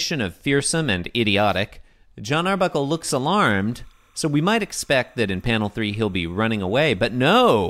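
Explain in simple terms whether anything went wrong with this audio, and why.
From 2.57 s to the end, a faint, steady chirping warble runs quietly behind the speech. This is timecode bleed: a timing signal from a nearby cable or track leaked in, flipping between pitches near 1 kHz and 2 kHz, which fits 30-frame timecode.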